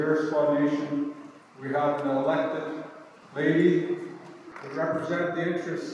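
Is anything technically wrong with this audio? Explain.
No, nothing technically wrong can be heard in this audio. There is no fault to explain.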